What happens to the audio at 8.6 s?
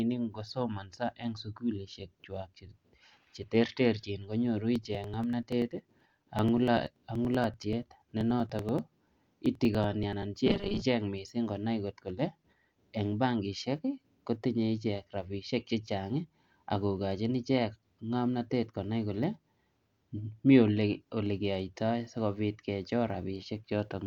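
Periodic USB or driver dropouts run from 4.76 to 10.23 s. Every 0.096 s a few milliseconds of speech are skipped, giving steady ticks.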